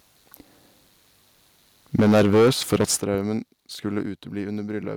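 From 1.98 to 2.85 s the loudest speech peaks push about 13 dB past the converter's limit, likely microphone overload. The waveform shows flattened, squared-off tops on roughly a fifth of the samples, and the spectrogram fills with harsh broadband crackle above each peak. At 2.0 s and again at 3.0 s the level drops abruptly by about 3 dB and then about 11 dB, each likely the microphone volume being stepped down by the call software. The waveform envelope shrinks in a single step, and the whole spectrogram dims evenly at that instant. From 3.14 to 3.28 s a phantom power thump is heard: a supply switched on or off on the live input sends a voltage step through the coupling capacitors. It makes a deep thud that decays in about 31 ms and appears as a low-frequency blob along the spectrogram's bottom edge and as one large lopsided excursion in the waveform. At 4.02 s the level falls again by about 4 dB, likely another microphone volume step-down, seen as the same sudden, uniform narrowing of the waveform.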